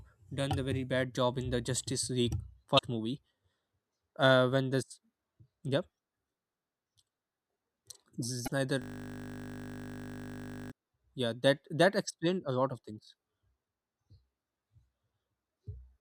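At 2.75 to 2.79 s and again at 8.44 to 8.48 s, the speech breaks into a brief glitch lasting about 40 ms. This is damaged data in a compressed stream: part of the encoded data was corrupt, so the decoder misread those frames, lost its place, and had to search for the next valid frame header. What sets it apart from a playback stall is that each event is a single short glitch rather than a repeating pattern.

From 8.82 to 10.72 s, the sound locks into a steady buzz. This is a system hang loop. The system froze while the audio hardware kept replaying the same 20 ms slice of its ring buffer, about 95 times in a row. That exact repetition at 50 Hz produces a pitched drone, which fits a short buffer. A 20 ms loop is too fast to be heard as a stutter. Unlike the corruption blips, it holds for nearly two seconds and never changes, because nothing new reaches the output until the freeze ends.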